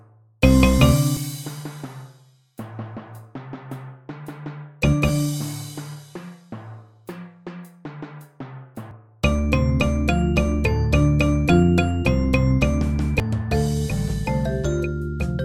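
Three brief blips at about 1.17 s, 8.91 s and 13.20 s point to damaged data in a compressed stream: corrupted bytes made the decoder misread those frames, lose sync and resume at the next valid frame header. On a waveform each shows as a sharp discontinuity only a few milliseconds wide; a spectrogram shows a thin vertical broadband streak at each time.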